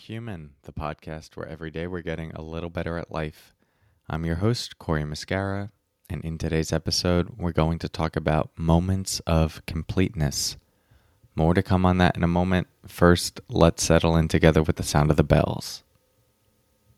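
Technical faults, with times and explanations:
0.07–3.43 s and 4.12–7.36 s, automatic gain rising: level climbs about 6 dB, then about 5 dB, over several seconds. Background swells with speech, unlike a sudden step or gate.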